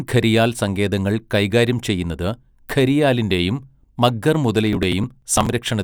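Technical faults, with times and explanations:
4.73–5.49 s, processor overload crackle: a gritty, tearing crackle sits on top of the speech for about three quarters of a second and stops cleanly once the load eases. The processor fell behind on its small audio buffers, around 5 ms each, and missed roughly twenty deadlines over that stretch. Each missed buffer was skipped rather than filled, so the audio jumps forward with a hard edge every few tens of milliseconds, and that dense run of tiny discontinuities is what turns into crackle.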